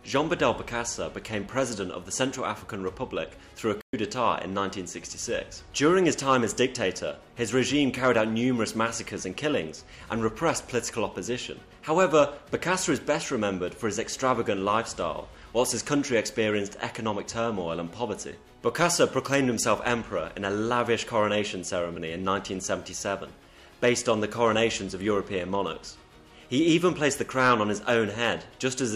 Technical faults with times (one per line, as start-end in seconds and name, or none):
3.81-3.93 playback stall